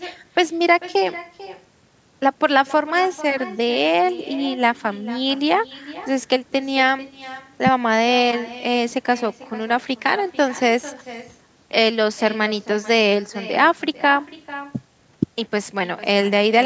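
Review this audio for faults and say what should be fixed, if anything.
Echo with no canceller runs throughout the speech. Every phrase returns as a fainter, thinner copy around 0.4 s later, sitting about 17 dB below the direct sound. The far end is playing the call through a loudspeaker, its microphone picks that playback up, and nothing subtracts it before it travels back across the network. The delay reflects that full round trip. To fix it, enable acoustic echo cancellation on the far-end device or have that participant use headphones.

The lack of content above 8 kHz fits ordinary call microphone processing and needs no change.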